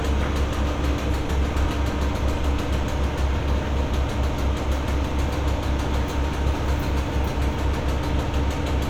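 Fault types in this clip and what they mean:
No faults can be heard.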